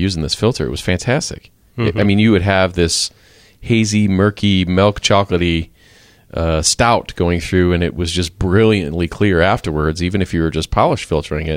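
A speech recording carries two isolated clicks at 2.02 s, just before "mean you would have", and at 5.39 s, right after "murky milk". Each is most likely dropped samples: a fraction of a millisecond of the stream goes missing, so the waveform jumps abruptly and produces a thin vertical streak across the spectrum. Unlike a dropout, no audible stretch of sound disappears and there is no silence. Only the sharp tick is heard.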